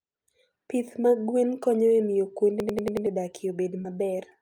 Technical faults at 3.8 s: short concealed packet loss

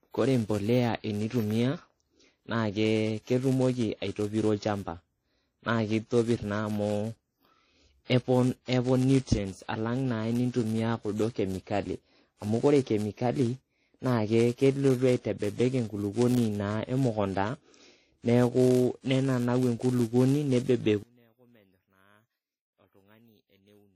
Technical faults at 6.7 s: block size mismatch (padded); transcoding between lossy codecs

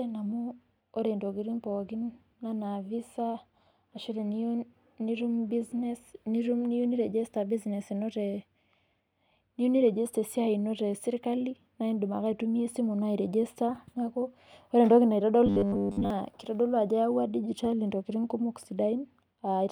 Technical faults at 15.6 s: robotic sound from repeated short buffers

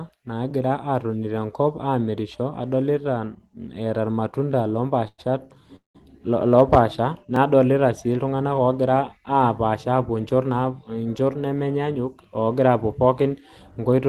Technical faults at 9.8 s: none

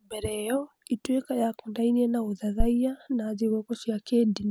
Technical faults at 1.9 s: none

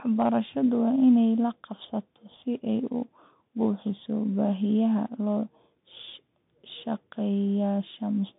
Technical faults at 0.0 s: Bluetooth CVSD headset codec

